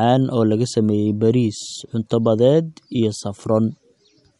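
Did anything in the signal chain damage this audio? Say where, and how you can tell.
Yes. The damage sits at the codec stage and runs through the whole speech clip. Everything above 11.2 kHz is missing, and the remaining top end sounds watery and swirly, with chirpy, metallic s sounds and smeared consonant onsets. A spectrogram would show a hard ceiling at 11.2 kHz and speckled holes in the upper bands where weak lines drop in and out between frames. This is likely MP3 compression at a low bitrate, around 49 kbps.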